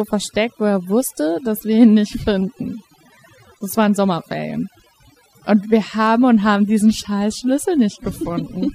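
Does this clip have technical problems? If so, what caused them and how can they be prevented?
Yes. Overdone noise removal runs throughout the speech. The noise reduction was set too aggressively, so it pulled individual frequency bands down hard or shut them off whenever they came near its estimate of the background noise, taking the quieter parts of the voice with them. The background drops away and breaks up into twinkling specks. Prevent this by applying gentler reduction settings and checking the result by ear before committing.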